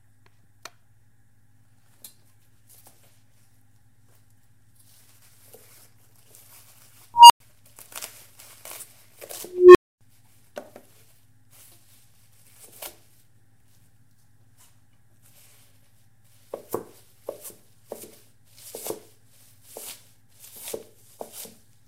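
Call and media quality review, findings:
Unstable filter, 7.14–7.40 s. Recursive filter stage diverged on bad coefficients. A tone around 1 kHz swells over about 160 ms, clips, then overflow mutes output for 105 ms until the filter resets.

Unstable filter, 9.45–10.01 s. Recursive filter diverging again. A lower tone, around 400 Hz, builds over about 300 ms to a loud squeal and clips, then 260 ms of silence before reset.

Compressed frames skipped, 11.52 s. Decoder dropped missing or rejected frames. Playback jumps ahead roughly 70 ms, which points to about three lost frames.

Compressed frames skipped, 18.03–18.05 s. Same decoder-side drop. The audio again jumps ahead roughly 70 ms, consistent with about three frames missing.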